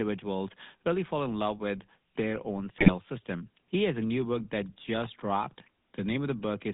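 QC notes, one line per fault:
Throughout, GSM full-rate codec: the speech has a buzzy, gravelly roughness, plainly audible, and everything sits inside a narrow phone band of roughly 150 Hz to 3.7 kHz, so it sounds thin and boxed in. This is the early GSM coder at a rate that fits 13 kbps. It rebuilds the voice from a vocal-tract filter fed by a coarse, regularly spaced pulse excitation that keeps only a fraction of the detail. The grit comes from that simplified excitation.
2.78 to 2.93 s, GSM bit errors: just after "love with their own" the speech briefly breaks up into a squawking, gargled burst with sudden jumps in level, lasting about 0.15 s. This is what corrupted bits sound like when they get through to the decoder. They hit the filter, pitch or gain values over what sounds like a handful of consecutive frames, so each frame is rebuilt with a bent spectrum or a wrong level.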